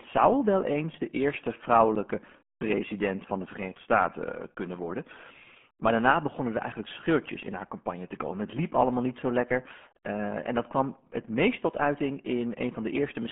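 From the first second to the last, the speech sounds muffled and gargly, with a watery, bubbling roughness on every syllable and no air or sparkle. Nothing above about 3.7 kHz comes through, and the usable band sits roughly between 200 Hz and 3.4 kHz, like a phone line. This is the RealAudio 14.4 codec, built for dial-up modems. Its heavy damage points to a rate near 8 kbit/s, too low to capture the voice's fine spectral detail.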